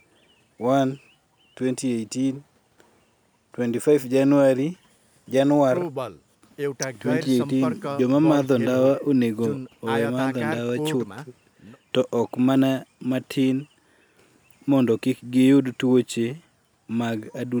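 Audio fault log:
No faults were heard anywhere in this recording.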